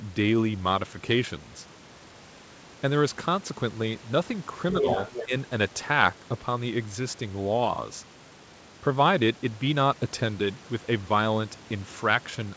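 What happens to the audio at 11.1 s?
Nothing goes wrong at 11.1 s: the speech carries on intact, with only the usual band limit at about 8 kHz from the call path.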